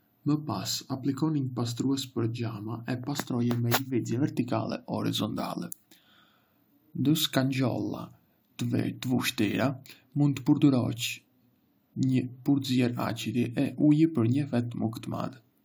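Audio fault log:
No faults heard anywhere in this speech clip.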